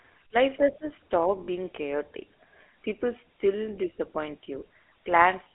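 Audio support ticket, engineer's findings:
GSM full-rate codec throughout: speech coded by the old regular-pulse vocal-tract model, consistent with 13 kbps full rate. Excitation heavily decimated, giving plainly audible buzzy, gravelly roughness; line band limited to about 300 Hz to 3.5 kHz, no top end.

Lost GSM frames, 1.44 to 1.49 s: roughly 40 ms of bad frames, fitting two 20 ms frames. Decoder repeats the last good frame's parameters; the sound is held briefly as a rough metallic ring.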